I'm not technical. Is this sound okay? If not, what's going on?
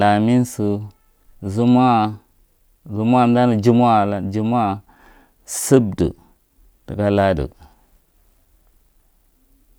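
Yes, it sounds fine; nothing wrong can be heard.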